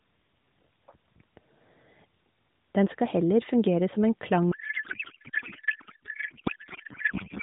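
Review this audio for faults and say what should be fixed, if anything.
From 4.52 s to the end of the speech, a codec payload misread replaces the speech with garbled noise and warble that barely tracks it. This fits octet-aligned AMR being unpacked as bandwidth-efficient: the fields shift, so the decoder reads plausible frames holding the wrong parameters. On a spectrogram, the harmonics and formant bands give way to smeared, patternless energy below the 4 kHz narrowband ceiling. On the waveform, the envelope stops following syllables. To prevent it, make both ends negotiate and honour the same AMR payload format in the session description.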